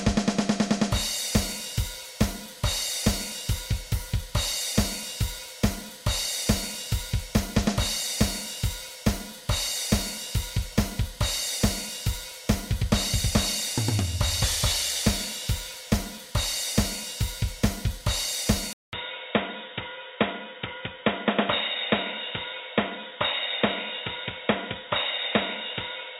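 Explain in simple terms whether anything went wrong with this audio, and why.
At 18.73 s the sound cuts out for 0.2 s. It comes back duller and boxier until the end, with nothing above 3.8 kHz and a faint new background noise. Loudness stays about the same. This is likely an input switched to a poorer device.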